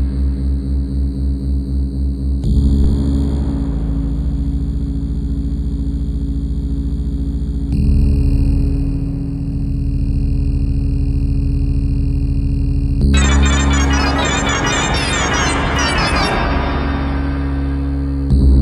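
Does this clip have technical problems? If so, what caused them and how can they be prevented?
Yes. A phantom power thump at 2.84–3.00 s comes from the supply switching on or off on a live input, sending a voltage step through the coupling capacitors. It peaks at about -7 dBFS and decays in 36 ms, a single large slow swing on the waveform and a brief low-frequency smear on a spectrogram. Mute the channel before toggling phantom power.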